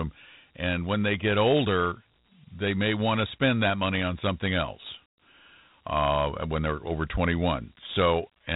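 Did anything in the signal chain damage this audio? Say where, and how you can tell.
Yes: Dialogic VOX ADPCM damage throughout, at the codec stage. Nothing above 3.8 kHz, with gritty hiss tracking the speech, fits 4-bit ADPCM at about 32 kbps.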